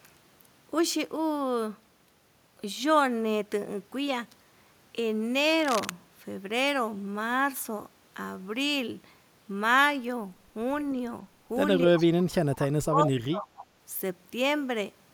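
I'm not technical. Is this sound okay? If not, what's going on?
No. From 5.50 to 5.93 s there is a brief scratching, rustling noise. This is cable scratch noise, likely from a worn cable or plug being moved.

At 11.86 to 12.01 s and 12.56 to 13.51 s the voice sinks and drops out in pieces. This is speech suppressed in double talk, likely from both sides talking at once.

At 11.98 to 12.06 s and 13.56 to 13.66 s a faint copy of the voice returns about 0.28 s late. This is echo leak, likely from a loudspeaker on the other end.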